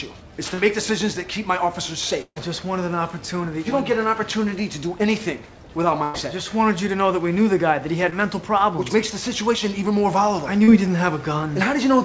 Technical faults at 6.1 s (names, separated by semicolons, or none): burst of packet loss